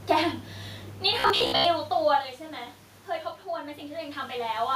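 From 1.20 s to 1.65 s the speech turns into robotic sound from repeated short buffers, a rigid metallic buzz at 66.7 Hz. That fits a 15 ms segment replayed while audio arrived too late, likely, with most of the actual signal skipped.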